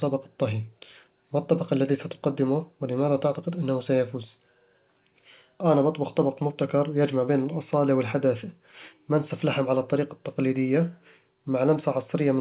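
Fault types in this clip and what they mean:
The speech sits in a band ending at 4 kHz, consistent with a narrowband call path such as G.711 A-law at 64 kbps, and no faults can be heard.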